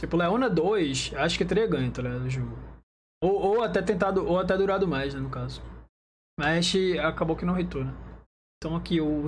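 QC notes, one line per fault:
Nothing stood out on listening.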